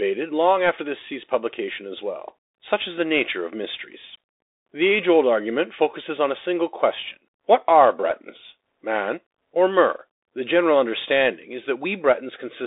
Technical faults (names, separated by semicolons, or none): Bluetooth CVSD headset codec